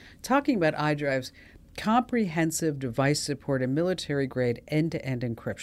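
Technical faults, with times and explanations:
Nothing technical to flag here; the speech runs along without any problems worth pointing out.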